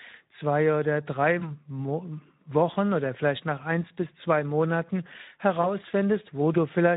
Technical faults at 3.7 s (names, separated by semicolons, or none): Speex codec